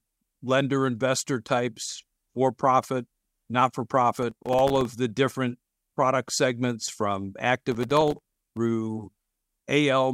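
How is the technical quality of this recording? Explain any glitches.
The recording has two stretches of processor overload crackle, heard as gritty tearing laid over the speech.

Processor overload crackle at 4.16 to 4.85 s (after "for profit not for", before "the different product segments") and 7.72 to 8.57 s (after "different product segments from"): the processor fell behind on very short buffers of around a millisecond and a half. It missed a couple of dozen deadlines in the first burst and several dozen in the second. Each miss left a hard-edged gap of silence. Strung together, the gaps sound like a rough crackle that stops as soon as the load clears.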